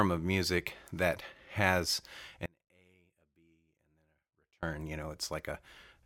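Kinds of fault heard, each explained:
Audio dropout to a faint residue: Just after "of music that has", at 2.46 s, the speech cuts out abruptly rather than pausing or fading. For about 2.17 s, until 4.63 s, only a faint trace of the sound remains, roughly 35 dB below its normal level. The signal then returns mid-flow. The likely cause is the wanted signal being lost while the path after the break stayed live, so only leakage came through.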